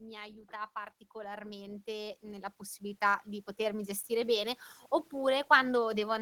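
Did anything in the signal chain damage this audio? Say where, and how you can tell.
Yes. Automatic gain rising runs from 0.49 s to 4.6 s, in the call-processing stage. Across those four seconds the speech and the room noise under it swell together by about 15 dB, smoothly rather than in steps. That shared, slow climb is the tell: the level detector judged the input too quiet and kept turning its gain up, lifting everything in the channel at once instead of just the talker.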